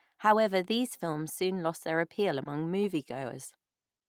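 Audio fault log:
2.43–2.47 s, short concealed packet loss: about 20 ms of speech arrived too late to decode, so the receiver extrapolated the preceding sound, leaving a brief smeared wobble.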